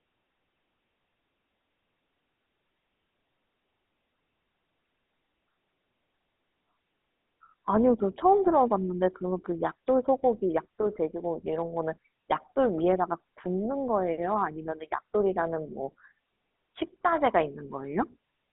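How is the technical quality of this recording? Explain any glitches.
Quality is poor, with one fault running the whole length. Throughout, the speech sounds buzzy and gravelly, thin between about 200 Hz and 3.6 kHz, with nothing above 3.9 kHz: GSM full-rate codec damage, consistent with 13 kbps pulse-excited vocal-tract modelling.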